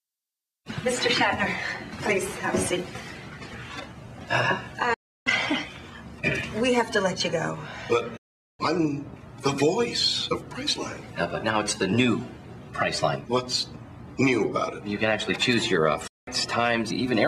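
At 4.94 to 5.27 s, 8.17 to 8.60 s and 16.07 to 16.28 s the sound fades to silence within about 8 ms: digital broadcast dropouts, where the receiver muted on lost or corrupt frames. Each hole discards the programme sent during it, and playback resumes later.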